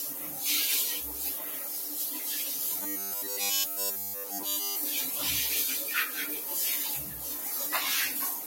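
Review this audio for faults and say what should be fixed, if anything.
The whole clip has a speech-tuned noise suppressor applied to music or sounds. It treats the steady parts and tails of these everyday sounds as noise and keeps riding the gain, so the level pumps and thins, with swings of around 5 dB. Sudden onsets get through, but anything held or decaying gets pulled down. To prevent it, bypass speech noise suppression whenever the source isn't a voice.

There are four spots of sound cut by the noise suppressor, where it clamps harder: 0.14 to 0.38 s (about 4 dB down), 1.43 to 1.68 s (about 3 dB), 4.15 to 4.32 s (about 4 dB) and 7.08 to 7.25 s (about 4 dB). Each lasts a fraction of a second, and you hear a tail shortened or a steady stretch briefly sinking. To prevent it, disable the suppressor, or at least lower its strength for non-speech material.

From 2.82 to 4.76 s there's robotic sound from repeated short buffers. 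Essentially all of that stretch is a short chunk looping, which imposes a rigid, metallic 100 Hz buzz. That fits a 10 ms buffer being replayed while the real audio is skipped, most likely because new audio was arriving too slowly. To prevent it, give the audio path a bigger buffer and make sure playback isn't starved.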